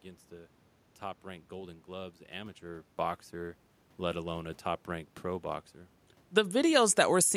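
There are no technical faults to describe in this speech; the background room noise and the talker's shift in distance from the microphone at about two and a half seconds belong to the recording itself.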